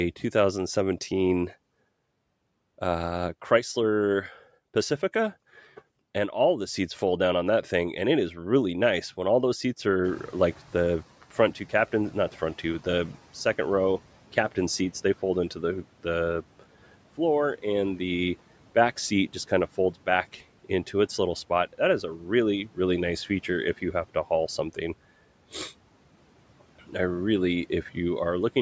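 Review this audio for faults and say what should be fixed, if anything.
Noise suppressor catching up, 10.04 to 11.1 s: room noise jumps about 19 dB near 10 s, leaks through briefly, then sinks about 10 dB over roughly 1.06 s. Faster noise-estimate tracking would shorten this.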